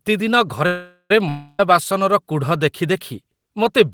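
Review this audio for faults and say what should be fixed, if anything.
From 0.66 to 1.14 s the speech stops and the last sound carries on as a fading buzz for about 440 ms, ending in roughly 60 ms of silence. The speech then resumes exactly where it left off, with nothing skipped, so everything after it arrives about 440 ms later than it should. This is a call audio freeze, likely caused by packets held up in transit long enough for the jitter buffer to run empty. It could be prevented with a larger or adaptive jitter buffer and better network prioritisation for voice traffic.

From 1.29 to 1.60 s there is a long network dropout. The speech cuts off and the last sound is extended as a decaying buzz for about 300 ms, with no silence reached. When the speech returns it has jumped forward, and those 300 ms of the original are gone. The likely cause is a burst of lost packets that never reached the receiver, leaving concealment to fill the gap. 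It could be prevented with forward error correction or redundant packet transmission on the voice stream.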